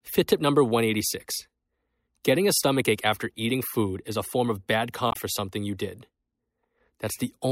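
At 5.08 to 5.16 s, after "a form of bad", damaged data in the compressed stream knocks the decoder out of sync, leaving a quick glitch.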